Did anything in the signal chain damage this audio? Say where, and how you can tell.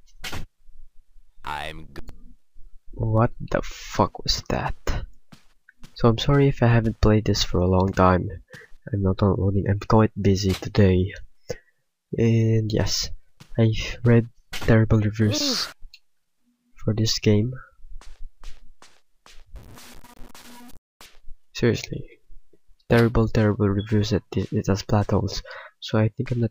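Yes. From 19.56 s to 21.06 s the sound turns grainy, with a distortion that rises and falls with the signal. This is low bit depth without dither, likely from a sample-format conversion that truncated the samples to about 7 bits. The rounding error tracks the waveform and sits only around 25 dB below it. Dithered requantisation would give constant, level-independent noise instead, and codec damage would smear or warble rather than crackle with the signal.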